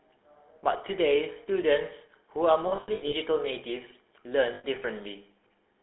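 Speech heard through the GSM full-rate codec throughout, with plainly audible buzzy, gravelly roughness and a narrow 250 Hz to 3.5 kHz line band, which fits a 13 kbps stream. Lost GSM frames appear from 2.68 to 3.14 s, scattered losses totalling 280 ms with runs up to roughly 70 ms, and again from 4.54 to 4.65 s for 100 ms. The decoder holds the last good frame there, producing a rough metallic ring.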